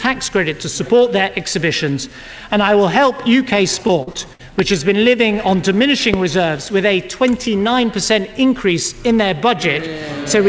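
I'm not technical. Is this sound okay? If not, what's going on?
No. Between 3.87 and 4.41 seconds there is repeated packet loss, which gives a choppy, robotic sound. Four small pieces of the audio never arrived in time, each under a tenth of a second. The system covered each hole by stretching the last bit of sound, so about a quarter of that half-second is filler.

There is a loud pop at 4.59 to 4.61 seconds, and another at 6.14 to 6.16 seconds. Each is a single sharp click sitting on top of the sound, which carries on underneath. The likely cause is a sudden electrical jolt, such as static, a loose plug or a switch.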